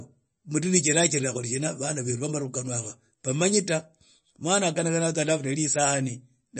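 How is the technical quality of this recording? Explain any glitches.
Quality is noticeably degraded by likely MP3 compression throughout. Nothing is heard above 8.3 kHz. The encoder cut the treble and dropped weak frequency lines frame by frame. Speech sounds watery and swirly, with smeared attacks, consistent with a low bitrate near 33 kbps.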